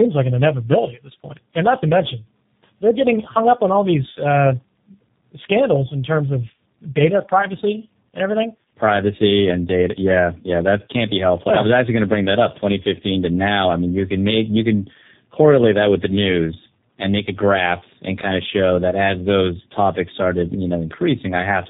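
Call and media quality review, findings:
Tandem speech coding, throughout. Speech rough, muffled, warbly; nothing above 3.8 kHz. Probable path: G.723.1 at 6.3 kbit/s, G.711 A-law transit, then G.729A at 8 kbit/s. Second coder re-encodes the first's damage, so the artefacts compound. Rougher than single-codec narrowband, which would be band-limited but cleaner.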